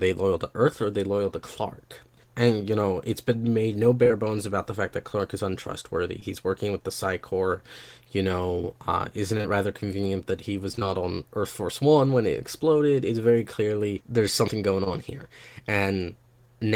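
Speech with short concealed packet loss at 4.03–4.08 and 4.08–4.12 s (between "it's been made no" and "bones about the fact"), 6.20–6.23 s, 9.37–9.41 and 9.41–9.46 s (just before "rather convenient that he"), and 14.84–14.88 s. Each time about 20 ms of audio went missing and the decoder extended the preceding sound, so a spectrogram shows brief smeared, flattened stretches before normal detail returns. At 10.72–10.84 s, right after "rather convenient that he", repeated packet loss gives a choppy quality with pieces missing: three 20 ms gaps were each patched, with about 45% of that span synthesized, and the waveform looks like a string of repeated, slightly blurred fragments.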